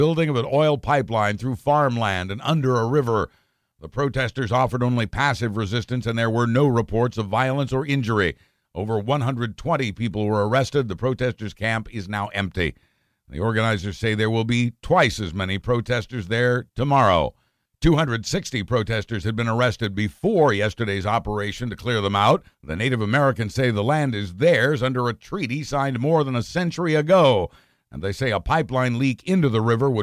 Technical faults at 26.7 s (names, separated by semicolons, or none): none